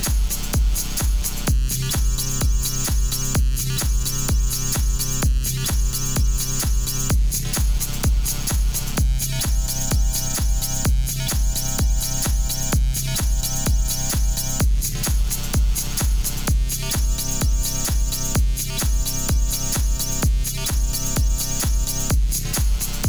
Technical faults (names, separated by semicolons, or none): clock drift buffer slips